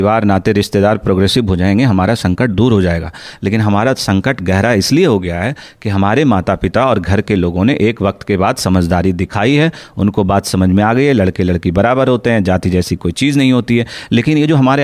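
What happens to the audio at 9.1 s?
Nothing goes wrong at 9.1 s; the speech carries on intact through that moment.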